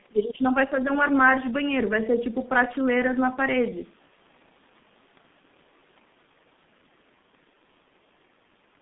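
Throughout the speech, the signal has passed through a G.723.1 codec, whose slow-updating voice model, at a rate the sound suggests is around 6 kbit/s, smears each 30 ms frame. The band is squeezed to roughly 150 Hz to 3.6 kHz, leaving the speech muffled and hoarse, with consonants heavily blurred.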